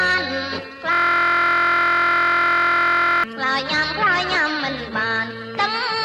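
From 0.93 s to 3.24 s the audio suffers a system hang loop: the computer or its audio driver stalled, while the sound hardware kept replaying the same stretch of its ring buffer. The repeating slice is 23.22 ms long, which fits a 1024-sample buffer, and it cycles about a hundred times. Because the loop is so short, the sound turns into a steady buzz at 43.1 Hz.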